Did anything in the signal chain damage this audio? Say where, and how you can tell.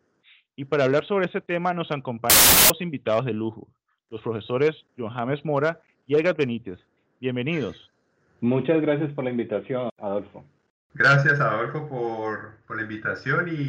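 Yes, there's a wrong sample width fault at the sample-format conversion stage, from 2.30 to 2.70 s. That stretch turns into loud noise with the real sound buried underneath, running 1.33 times fast and pitched up to match. Packed 24-bit data got read as 32-bit integers, so every read grabs four bytes from three-byte samples. The sample boundaries slide out of line and the sound plays back about a third too quickly.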